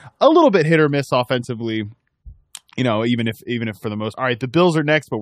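Stream segment skipped at 4.12 s: right after "even if for the", the speech jumps abruptly forward with a brief blip at the join, as if a stretch of the recording had dropped out. The cause is likely a segmented stream in which one chunk failed to load, so the player moved straight on to the next chunk and discarded the missing portion, leaving a hard splice where the continuous flow of speech breaks.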